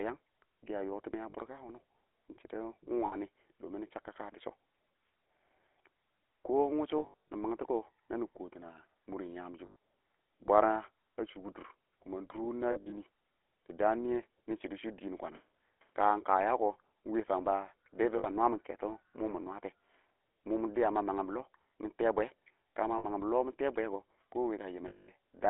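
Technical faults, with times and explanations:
Throughout: GSM full-rate codec. The speech has the buzzy, gravelly roughness of the original 13 kbps full-rate coder, which models the vocal tract and excites it with a sparse, regularly spaced pulse train that keeps only a third of the excitation samples. The coarse excitation produces the grainy texture, and the damage is plainly audible. The line band runs from about 300 Hz to 3.4 kHz, so the top end is dull and the bottom thin.
1.30, 3.06, 6.98 to 7.30, 9.66, 12.72 to 12.93, 18.18, 22.98 and 24.88 to 25.10 s: lost GSM frames. At each gap the decoder reuses the last good frame's parameters, so the sound hangs as a rough, metallic ring instead of dropping out. The gaps run from 40 ms at 1.30 s up to 240 ms, scattered in runs of up to around 70 ms before "nɪ mangtɔ" at 7.3 s. The 60 ms gap at 22.98 s follows "ka ma", and the 200 ms gap at 24.88 s is one of the longest. 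These lengths fit whole 20 ms frames being dropped.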